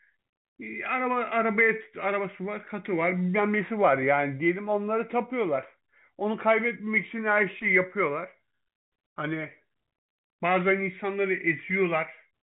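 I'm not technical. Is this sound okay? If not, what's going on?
Yes, nothing is wrong here.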